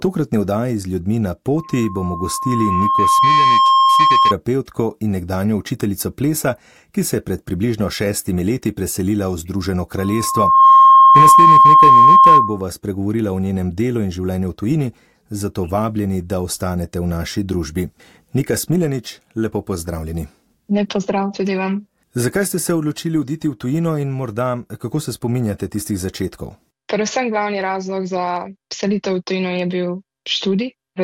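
A tone at 1.1 kHz swells into a loud squeal from 1.57 to 4.34 s and again, faster, from 9.97 to 12.62 s: loudspeaker feedback squeal, where the microphone re-amplifies its own loudspeaker.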